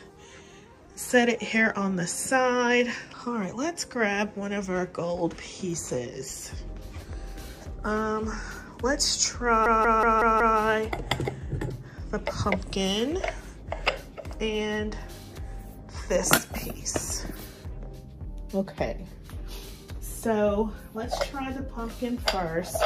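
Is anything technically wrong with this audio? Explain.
Yes. From 9.66 to 10.59 s there is a system hang loop: the playback system froze while the sound hardware kept replaying its ring buffer. A 186 ms slice, which fits an 8192-sample buffer, repeats exactly five times at about 5.4 Hz, giving a machine-gun stutter rather than a buzz. Unlike a dropout, nothing falls silent, and unlike a buffer underrun glitch, each repeat is an identical copy.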